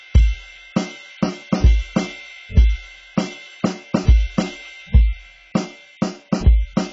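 AAC compression throughout this music clip: nothing above 7.7 kHz, heavily smeared and warbly, likely AAC-LC at a very low bitrate, which fits about 16 kbps.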